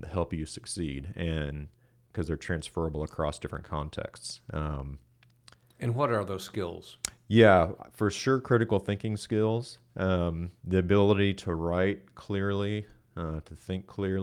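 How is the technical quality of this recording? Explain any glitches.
The recording is affected by a clock mismatch that shows up as recurring small timing glitches through the speech.

Clock drift between sender and receiver runs through the whole clip. The sender's clock is about 2% slow, so the receiver's jitter buffer keeps draining. Short gaps must be filled, and the flow of speech feels faintly uneven rather than steady.

Repeated timing corrections occur from 0.20 s to 14.01 s. To keep step with the slower sender, the receiver repeatedly stretches the audio by repeating short pieces, all in the same direction. Together these add roughly a third of a second. The speech plays at 98% speed, with slight hiccups at irregular spacing.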